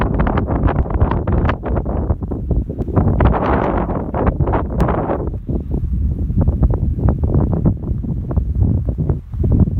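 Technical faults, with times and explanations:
0.83 to 4.81 s, periodic USB or driver dropouts: something stalls the USB bus or audio driver every 2.0 s, and each time a couple of milliseconds of audio are skipped outright. The joins leave about three evenly spaced ticks over the running sound.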